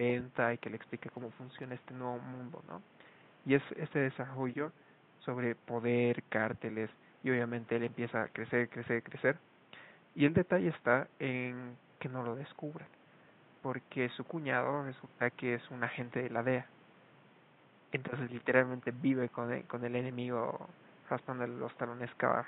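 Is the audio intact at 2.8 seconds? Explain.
Yes, the audio is intact at 2.8 seconds, with only the room's own background noise sitting about 28 dB below the speech.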